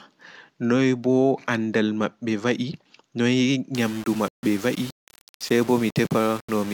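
From 3.75 s to the end the speech goes grainy and gritty, likely low bit depth without dither, around 5 bits rounded, with distortion tracking the voice.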